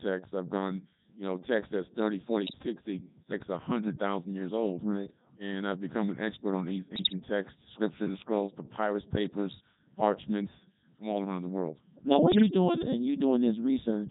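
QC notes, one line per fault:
Throughout: Codec 2 vocoder. The speech passes through a very low-rate parametric coder, which fits its 3.2 kbit/s mode. Only pitch, voicing, energy and a coarse spectral envelope survive, and the decoder rebuilds each frame from sine waves rather than from the original waveform. The damage is heavy, so the speech comes out robotic and buzzy, with a synthetic timbre.
2.46–2.58 s, 6.96–7.20 s, 12.32–12.54 s: bit errors on digital voice radio. Flipped bits hit the vocoder's frame parameters in short bursts, at a few percent of bits. The middle burst falls between "an expert on these" and "texts scripture". Each corrupted parameter mis-sets the pitch, level, voicing or envelope for a whole frame, and the bursts span what fits roughly four to ten frames. The speech briefly lurches in pitch and loudness and breaks into warbling, bleepy gibberish.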